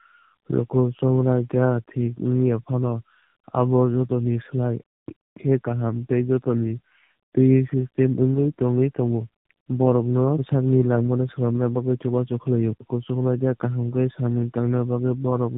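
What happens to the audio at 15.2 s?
Tandem speech coding runs through the whole clip, including 15.2 s: the speech passed through G.729A and then AMR-NB, so it sounds rough, muffled and warbly, with nothing above 3.8 kHz.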